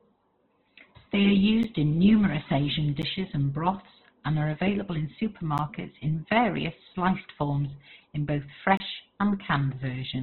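From the first moment the whole clip sounds squeezed: nothing above about 4.2 kHz, and the speech comes across rough and grainy. That's heavy damage that points to likely Opus compression at a very low rate, somewhere around 12 kbps, running in its music-style CELT mode. With so few bits, the encoder narrows the bandwidth and fills thin bands with noise, so tones turn grainy instead of swirly.

On top of that there are four blocks of digital silence, where samples were zeroed, most plausibly because the output buffer wasn't filled in time. Each cuts hard to nothing and back. The first three are short ticks, at 1.63 s just before "in numerous", at 3.02 s before "and broths and are", and at 5.58 s between "and are available in" and "in various sliced forms". Each lasts about 11 ms, which fits a 512-sample buffer. The last, from 8.77 to 8.80 s, runs about 27 ms and reads more as a brief hole than a tick.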